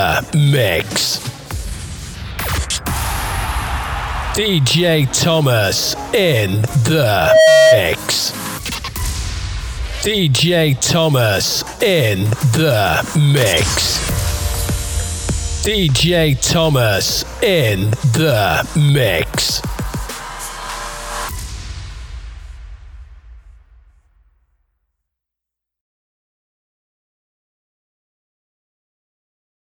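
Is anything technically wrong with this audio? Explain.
Yes, there's a loudspeaker feedback squeal from 7.15 to 7.86 s. A mic was catching the speaker it fed, and the loop tipped into runaway at 635 Hz: a pure tone swelling over roughly a third of a second until it sits about 10 dB above the audio.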